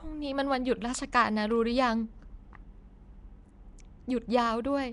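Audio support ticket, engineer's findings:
Likely Nellymoser compression (Flash-era Nellymoser Asao codec) across the whole speech clip. Fixed 2 bits per sample over 256-sample blocks. Weak bands get zero bits and are refilled with noise. Result: rough hissy halo, smeared underwater quality, plainly audible. Nothing above 10.6 kHz. Consistent with a stream around 44 kbps.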